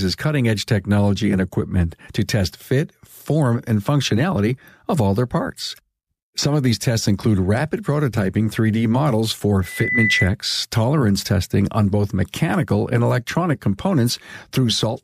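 From 9.62 to 10.34 s, a single piercing tone at 2 kHz swells over about a third of a second until it sits roughly 5 dB above the speech. This is loudspeaker feedback squeal: the microphone re-captured its own loudspeaker, and at 2 kHz the loop gain exceeded one.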